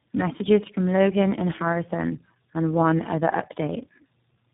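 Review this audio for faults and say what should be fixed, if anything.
Tandem speech coding affects the whole clip. At each network border the call was decoded and re-encoded, passing through three speech codecs in a row: G.723.1 at 6.3 kbit/s, GSM full rate at 13 kbit/s and iLBC at 15.2 kbit/s, with G.711 links between them. Each low-rate coder treated the previous coder's errors as part of the speech, so the damage compounds. The speech sounds rough, muffled and warbly, with nothing above 3.8 kHz. To prevent this, negotiate one codec end to end or use transcoder-free operation, so the speech is compressed only once.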